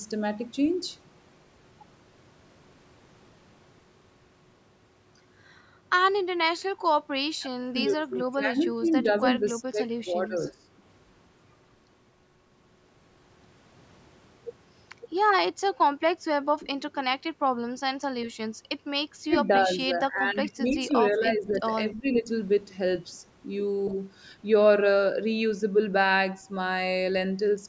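From 7.39 to 10.63 s the speech sinks in patches by up to about 20 dB. It happens again from 19.26 to 20.93 s (about 15 dB), 21.11 to 21.72 s (about 10 dB) and 21.93 to 22.28 s (about 15 dB). That's likely speech suppressed in double talk. Both ends were talking, the echo canceller couldn't separate this talker from the loudspeaker echo, and it ducked everything, so the speech thins out and drops away in chunks.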